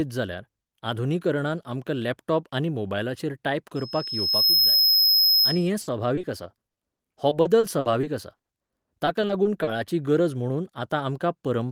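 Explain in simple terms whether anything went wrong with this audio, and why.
Two things went wrong. Just after "लॅपटॉप आनी मोबायलाचेर टायप", from 3.76 to 5.70 s, a loudspeaker feedback squeal appears. A high whistle near 5.1 kHz swells up in under a second. The microphone is picking up its own loudspeaker, and that one tone keeps feeding itself.

From 5.81 to 9.69 s, ending just before "गरज म्हुणून", there is repeated packet loss, giving a robotic sound. Small pieces of the speech never arrived. Each gap, the longest 80 ms, was patched by stretching the previous sound. About a fifth of that stretch is patched, so it sounds choppy.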